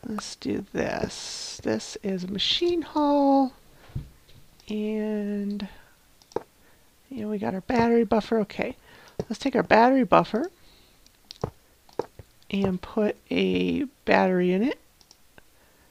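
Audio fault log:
0.33 s, repeated buffer: a 1.33 ms block plays once more after a hard join, which fits a 64-sample buffer, heard as a brief click.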